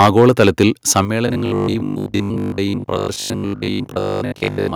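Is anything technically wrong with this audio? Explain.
Yes, there are three kinds of fault.

Microphone overload at 0.0–0.63 s and 0.96–1.0 s: peaks exceed the converter's limit by about 9 dB, then about 4 dB, likely from excessive input volume. The tops of a few percent of samples are cut off, so peaks look flat-topped in the waveform and sound harsh and crackly.

Microphone volume stepped down at 0.06 s and 1.05 s: the level drops by about 2 dB, then about 6 dB. This is likely software reducing input gain after clipping, and it shows as sudden downward steps in the waveform envelope.

Robotic sound from repeated short buffers, 1.28–4.74 s: most of the audio is replaced by looped fragments, likely because audio arrived too seldom. This fits a 20 ms buffer and imposes a rigid metallic 50 Hz buzz, seen as evenly spaced harmonic stripes on a spectrogram.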